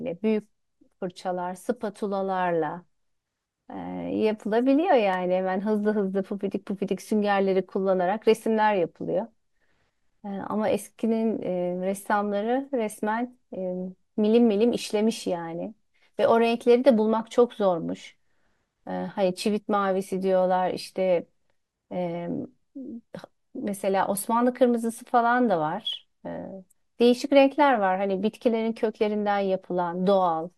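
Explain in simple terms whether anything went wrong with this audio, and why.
At 5.14 s there is one sharp click in the speech. This is likely dropped samples: a tiny sliver of sound went missing, making the waveform jump.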